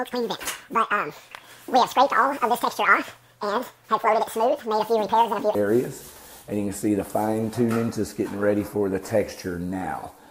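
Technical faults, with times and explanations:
0.0–5.55 s, audio read two samples at a time (double speed): consecutive sample pairs are taken as single frames, so the sound runs exactly 2x fast and 12 semitones higher. Unlike a simple sample-rate mismatch, discarded samples let upper frequencies fold back.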